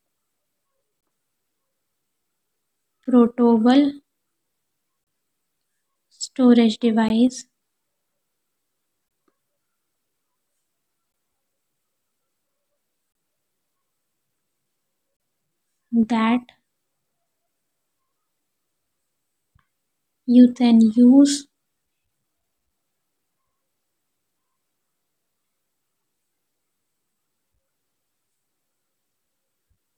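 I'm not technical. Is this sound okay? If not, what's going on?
No. The sound cuts to brief, hard-edged silences at 1.01, 3.04, 5.04, 7.09, 9.09, 11.12, 13.12 and 15.17 seconds. These are gaps between stream segments. The stream arrives in 2-second pieces whose timing doesn't quite line up, so the player inserts 12 to 31 milliseconds of silence between them.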